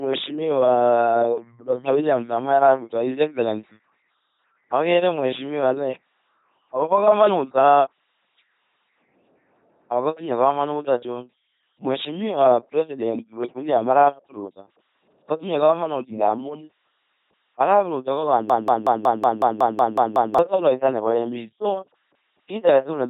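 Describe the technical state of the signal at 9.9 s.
At 9.9 s the speech has a buzzing, mechanical robot quality, with nothing above 3.8 kHz, and this runs through the whole clip. It is heavy LPC-10 vocoder damage, consistent with a 2.4 kbit/s vocoder: each frame is rebuilt as either a pitch buzz or noise through a short vocal-tract filter.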